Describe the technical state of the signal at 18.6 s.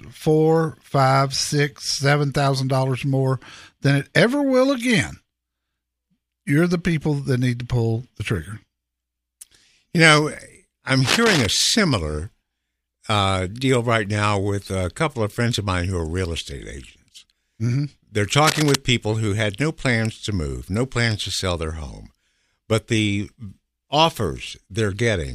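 At 18.6 s the speech is overlaid by cable scratch noise, running from about 18.44 to 18.79 s. It is a dense, ragged rustle, fairly loud against the speech, likely from a worn cable or connector being moved. It lasts about a third of a second, unlike a single sharp click.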